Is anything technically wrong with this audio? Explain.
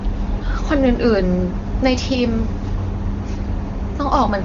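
No, nothing is technically wrong with this audio, and the AMR wideband (HD Voice) coding at 23.85 kbit/s leaves the speech clear.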